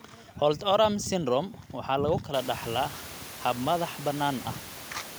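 Listening to this speech recording, nothing stood out as a technical problem; the room's own background noise rises noticeably around the middle but stays about 18 dB below the speech.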